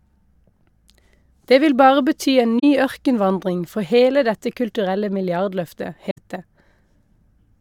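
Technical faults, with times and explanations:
2.59–2.64 s and 6.10–6.18 s: AAC frame loss with muting. The speech drops into brief silent gaps of about 43 ms and 64 ms, which fits two and three lost frames. The decoder zeroed the missing spectrum, and the overlapping transform windows fade the sound out and back in, so each hole has soft edges.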